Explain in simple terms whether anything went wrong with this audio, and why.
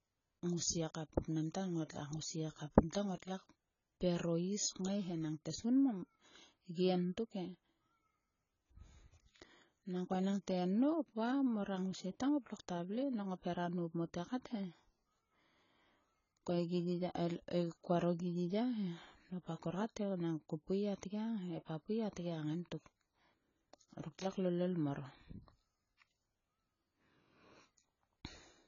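Something did go wrong, and it runs through the whole speech clip: it sounds like heavy AAC compression. The speech is dull, with nothing at all above 7 kHz, so the crisp edges of s and t sounds are gone. Sibilants and held sounds have a fizzy, warbling texture. The likely cause is that the file was squeezed very hard to save space. The encoder threw away the high frequencies and coded the rest too coarsely to sound natural.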